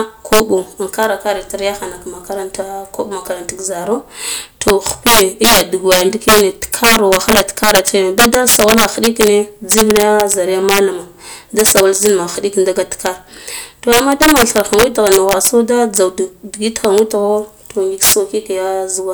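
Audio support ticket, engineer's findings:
Integer overflow, throughout: sharp cracks on loud speech peaks. Gain stage overdriven about 11 dB, around 1% of samples wrap past full scale to opposite sign instead of limiting.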